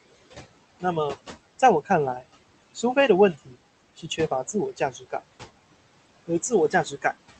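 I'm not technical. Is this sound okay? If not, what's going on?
No, not quite. All the way through, the background noise in the room dips away whenever the talking pauses and creeps back up underneath the voice. These are noise suppressor artifacts: the call software keeps guessing which parts of the sound are steady noise and turning those down moment by moment. The room noise itself is real and fairly low, but the constant pumping of it is what you hear.

In four places the voice itself gets swallowed: from 3.34 to 3.54 seconds, 3.97 to 4.19, 4.77 to 5.13, and 6.71 to 7.05. Bits of speech there suddenly go faint or swallowed, each time for a fraction of a second, a little longer in the third spot. This is speech cut by the noise suppressor: it mistook those quieter pieces of talking for background noise and turned them down along with it.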